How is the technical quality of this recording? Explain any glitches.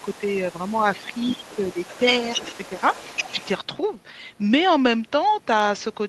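Two echo-related faults affect the first half of the clip, both during a stretch where the far end can be heard under the speech.

Other side's voice leaking through, 0.0 to 3.47 s: a second voice sits faintly beneath the speech, about 20 dB quieter, and stops at 3.47 s. The likely cause is a talker's device playing the far end on a loudspeaker, with the echo canceller leaving a residue of that playback in the microphone signal. The leaked voice comes through as a low, secondary layer.

Speech suppressed in double talk, 0.05 to 0.22 s and 1.03 to 1.8 s: while both sides are talking, the main speech is pulled down. The first dip is brief and shallow, a few dB over a fraction of that window. The second is much stronger, dropping by about 15 dB for roughly half a second in total, so the speech sounds ducked and partly swallowed. This is likely the echo canceller failing to separate the near talker from the loudspeaker echo and attenuating both together.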